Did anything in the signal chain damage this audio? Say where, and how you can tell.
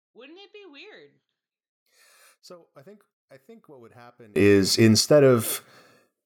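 Yes. Until 4.36 s, just before "is instead", the speech is about 31 dB quieter: one channel inverted, likely from analogue miswiring, cancelling when summed to mono.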